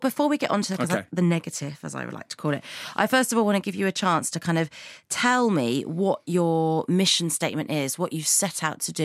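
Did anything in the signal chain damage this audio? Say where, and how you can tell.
No, nothing along the signal chain has left an audible mark on this speech recording, and the signal holds steady and continuous throughout.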